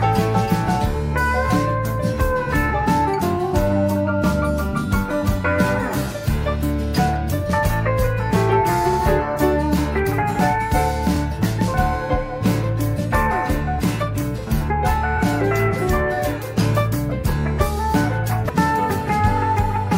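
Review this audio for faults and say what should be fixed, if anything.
Repeated frames occur at 8.92–8.97 s, 11.15–11.17 s and 15.17–15.19 s. Each time, a short run of compressed frames plays a second time: about 46 ms at the first spot and about 23 ms at the other two, which fits one or two frames of roughly 23 ms each. Each repeat is a brief stutter, and the audio runs about 93 ms longer in total. A dropout leaves a gap and a glitch corrupts the sound. Here, audio that already played is heard again and lengthens the timeline. Fix this by making the writer or transport track frame sequence numbers and discard any frame it has already sent or written.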